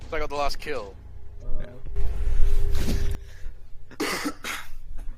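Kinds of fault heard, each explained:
Sudden gain jump: At 1.96 s the level leaps up by about 13 dB in a single step, with no fade, and it holds there until 3.15 s, where it drops back just as abruptly. The background noise rises and falls together with the sound, so the change sits on the whole signal. It is likely caused by a digital gain setting or bit shift applied instantly, without any ramp between the old and new values.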